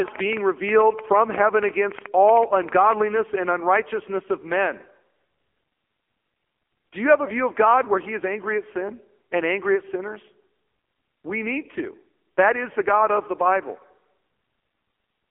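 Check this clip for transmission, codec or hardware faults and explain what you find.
The clip carries one fault, present from start to finish: AMR narrowband mobile codec damage. The band runs from about 250 Hz to 3.4 kHz, and nothing is heard above 3.4 kHz. The mobile codec rebuilds the voice from a vocal-tract model and a few pulses per frame, which leaves a buzzy, synthetic timbre. That heavy damage points to a low mode near 6.7 kbps. A simple telephone band-limit would sound muffled but clean, without this synthetic buzz.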